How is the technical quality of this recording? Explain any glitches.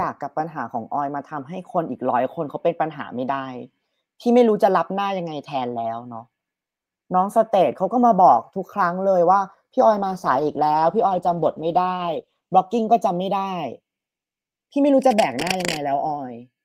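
The recording has three audible technical faults: one running through the whole clip and two shorter ones in the second half.

Channels drifting apart affects the entire speech clip. Separate clocks, roughly 40 ppm apart, let the inter-channel delay slide to about half a millisecond, so summing gives slow flanging rather than a fixed, static comb-filter colour.

A call bitrate drop runs from 9.81 to 13.67 s, when the encoder falls from 40 to 13 kbps for about 2.5 s. The coarser coding sounds watery and muffled, which sets it apart from a bad connection because it clears again once the bitrate recovers rather than dropping out.

Cable scratch noise appears from 15.02 to 15.77 s as dense, uneven rustling about 5 dB below the speech. It likely comes from a worn cable or connector being moved, and unlike steady hiss it comes in irregular bursts.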